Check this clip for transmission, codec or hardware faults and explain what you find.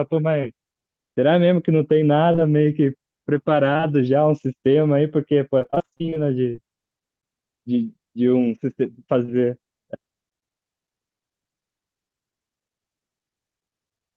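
Two kinds of transmission fault are audible, both caused by packet loss on a call.

Short concealed packet loss occurs at 0.41 s, 2.32 s, 2.36 s, 3.73 s, 3.77 s and 9.25 s. The events at 2.32 and 2.36 s run together, as do those from 3.73 s to 3.93 s. Each time, about 20 ms of audio arrived too late to decode. The receiver patched the hole by extending the preceding sound, then blended back. At 0.41 s and 3.77 s the patch adds a little extra time. Each one sounds like a brief smear or wobble.

Repeated packet loss, with a robotic sound, runs from 5.59 s to 6.59 s. Holes arrive roughly every 60 ms, and the longest is 25 ms. About a third of that second is concealment rather than real audio. Each gap is filled by continuing the last sound, and the next loss comes before the audio recovers. The stretch sounds choppy, with pieces missing.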